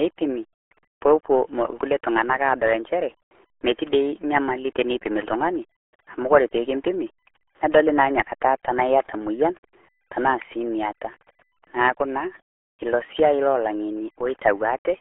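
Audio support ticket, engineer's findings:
RealAudio 14.4 codec, throughout. Speech muffled and gargly, heavy coding damage, nothing above about 3.8 kHz, band roughly 300 Hz to 3.4 kHz; fits an 8 kbit/s dial-up-era codec. Differs from a plain telephone band-limit by the warbling, smeared gargle, not just narrow bandwidth.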